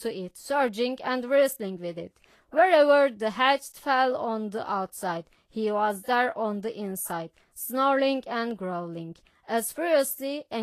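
Vorbis compression, throughout, likely at a low bitrate around 33 kbps: nothing above 14.1 kHz, and the coarsely quantised treble turns grainy and hissy, roughening the speech.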